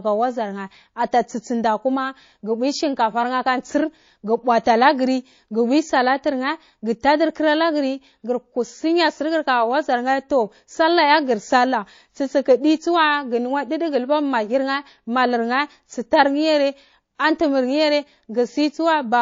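From start to finish the speech carries plainly audible codec damage, most likely MP3 compression at a low rate, which fits a bitrate around 32 kbps. Faint detail flickers in and out between frames, giving a watery, swirling texture, with metallic chirps on s sounds. Unlike broadband hiss or a simple low-pass filter, this damage moves with the signal and shimmers rather than sitting still.

At 17.15 to 17.19 s a sharp attack is preceded by pre-echo: a burst of hiss lasting 39 ms, rising about 14 dB above the surrounding floor, then the attack itself arrives soft and smeared. The encoder spread noise meant for the loud onset across a long block, which fits a window of about 72 ms with no switch to short blocks. What separates it from a click or dropout is that the noise comes before the attack, not after it.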